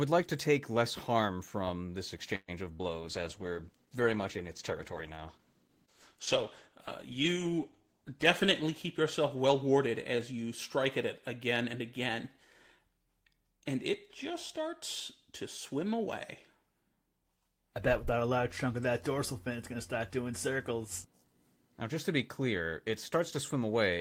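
Speech, with a cluster of call faults early on. At 2.35 to 2.65 s there is a call audio freeze. The last sound is held as a fading buzz or hiss, then about 20 ms of silence. The speech resumes where it stopped, with nothing lost. It is likely caused by delayed packets draining the jitter buffer, which adds roughly 124 ms of delay. Right after, at 2.73 to 2.82 s, a burst of packet loss follows. The receiver stretches the last sound for about 64 ms and fades it. About 60 ms of speech is then skipped, so the audio jumps ahead. From 2.86 to 9.39 s a call bitrate drop takes the encoder from 32 to 13 kbps. It stays at the lowest rate for about 5.5 s. The speech sounds coarse and rough until the bitrate recovers. From 8.05 to 10.33 s a jitter buffer speed-up cuts short pitch-period pieces to shed excess delay. Speech runs about 5% faster at the same pitch. Roughly 150 ms is removed, so the delivery feels slightly hurried.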